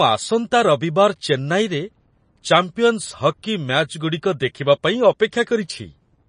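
MP3 compression damage runs through the whole speech clip, and it plainly shows. Nothing survives above 9.8 kHz, a hard treble cut of the kind an encoder makes when it is short of bits, and the level of damage fits a bitrate around 35 kbps. The likely cause is an MP3 encoder dropping quiet frequency lines that then flicker on and off between frames, giving a watery, swirling texture, metallic chirps on s sounds, and smeared attacks.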